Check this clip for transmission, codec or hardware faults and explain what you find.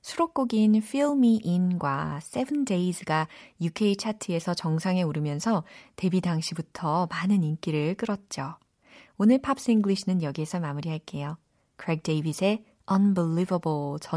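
No faults detected in transmission.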